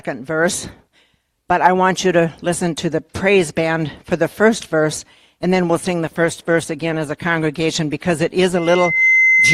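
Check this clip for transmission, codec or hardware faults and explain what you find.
Two faults stand out, a drop in the call bitrate followed by loudspeaker feedback at the end.

From 6.06 to 7.75 s there is a call bitrate drop. The encoder's rate falls from 128 to 20 kbps, staying at its lowest for about 1.6 s. Coarser coding makes the sound muffled and watery. On a spectrogram the upper band goes empty until the rate recovers.

From 8.56 s to the end, a loudspeaker feedback squeal builds at 2.1 kHz. Microphone pickup of the loudspeaker pushes the loop gain above one, so the tone swells over about half a second to sit a few dB above the signal. A spectrogram shows one bright horizontal line, and the waveform envelope grows steadily.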